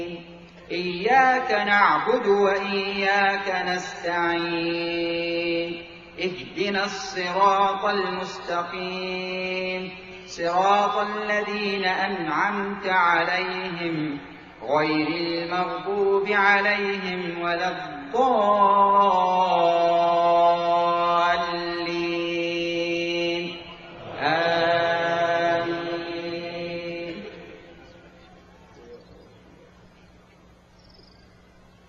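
Nothing stood out as a technical problem on listening to the audio.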